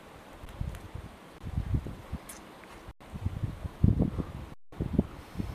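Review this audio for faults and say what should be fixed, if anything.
The audio has four underruns with held sample: a brief one at 0.45 s (about 12 ms), then 1.38–1.41 s (21 ms), 2.91–3.01 s (93 ms, which fits a 4096-sample buffer) and 4.54–4.72 s (186 ms, fitting 8192 samples). Each time the output buffer emptied, the converter held its last value, so the sound stops dead and then resumes where it left off with almost nothing missing. On a waveform each gap is a flat line, and on a spectrogram it is a blank vertical band with only a faint edge where playback resumes. Enlarging the output buffer or giving the audio thread higher scheduling priority would prevent this.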